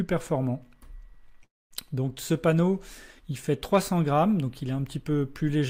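Right at 1.43 s there's a call audio freeze lasting until about 1.73 s. The sound hangs on as a buzzy tail that fades out, then sits silent for roughly 220 ms of the 273 ms gap. When it picks back up, it continues exactly where it stopped, so nothing's lost, but everything after lands about 0.27 s late. That's likely packets stalling in transit and the jitter buffer running dry.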